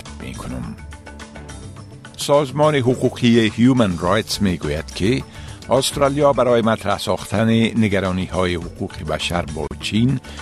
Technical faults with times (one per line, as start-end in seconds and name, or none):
9.67-9.71 gap at a join of encoded pieces